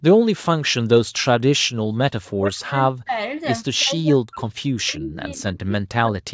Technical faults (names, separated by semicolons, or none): speech suppressed in double talk; echo leak